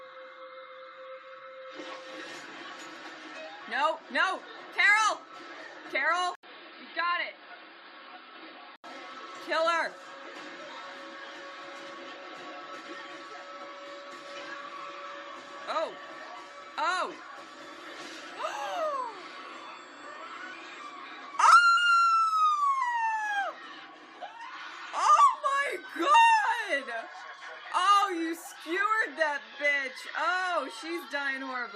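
Input switched to a poorer device, 6.35 to 8.84 s: after an 80 ms gap, the sound loses everything above 5 kHz, drops in level and gains new background noise, likely from a change of input device.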